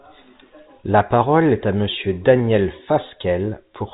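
Nothing goes wrong anywhere in this stretch of speech; it's simply got that familiar narrow telephone-line character, with everything above about 3.8 kHz gone, just as G.711 telephone coding would leave it.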